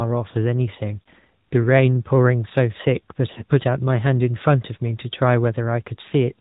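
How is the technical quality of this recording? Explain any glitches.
The quality is poor: the speech has passed through a narrowband mobile codec and has three brief dropouts.

AMR narrowband mobile codec: the AMR-NB coder rebuilds speech from a vocal-tract model at a low bitrate, which fits roughly 10 kbps, so it sounds muffled above 4 kHz and plainly buzzy and synthetic.

Lost AMR speech frames, at 1.02 to 1.08 s, 3.32 to 3.44 s and 6.08 to 6.13 s: when frames fail, the decoder stretches the last good pitch and vocal-tract settings at falling gain, producing short warbly dips that fit two lost 20 ms frames each.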